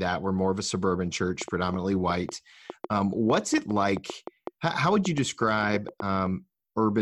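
A speech clip with a train of clicks running from 1.42 s to 6.27 s, starting just after "more of a suburban". Around twenty sharp, similar clicks arrive at about 4.7 per second. Their spacing is uneven. The loudest peaks stand about 10 dB above the speech. They tick through the pauses as well as over the talking. The likely cause is interference from nearby equipment or a faulty connection or power supply.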